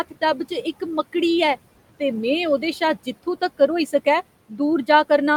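Noise suppressor artifacts run through the whole speech clip. The suppressor treats the steady room noise, which sits about 19 dB below the speech, as something to remove, and pulls down each band it judges to be noise on a frame-by-frame basis, by about 17 dB. The noise drops away in the pauses and comes back under each phrase, so the background pumps with the speech.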